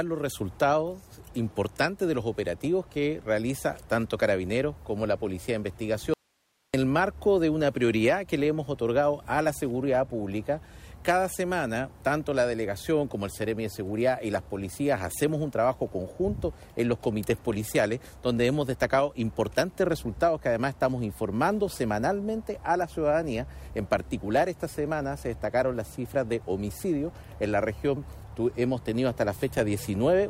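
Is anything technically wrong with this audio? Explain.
Yes. From 6.14 to 6.74 s there is an audio dropout to a faint residue. The source signal was likely lost for about 0.6 s while the stage after the break stayed live. The sound cuts out abruptly, leaving only hiss around 45 dB below normal level, then snaps back.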